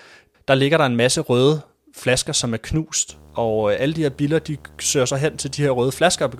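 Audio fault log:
3.09–6.39 s, video or display buzz: just after "røde flasker som er", a steady buzz at 75 Hz with gritty hash above it enters beneath the speech and stays to the end, sitting roughly 25 dB below the speech level. The 75 Hz pitch is the picture's field rate rather than a mains frequency, which points to a screen or its video cable coupling interference into the audio path, picking up the display's refresh pulses along with their harmonics.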